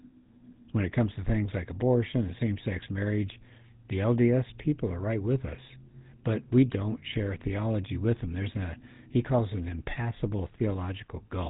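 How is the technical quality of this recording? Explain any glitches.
The whole recording has gone through the GSM full-rate codec, the old original mobile-phone coder, and the damage is plainly audible from start to finish. The codec rebuilds the speech from a vocal-tract model excited by evenly spaced pulses, keeping only a third of the excitation samples, and the coarse result fits its 13 kbps rate. That gives the voice a buzzy, gravelly edge, and nothing comes through above about 3.8 kHz, so it sounds dull and phone-like.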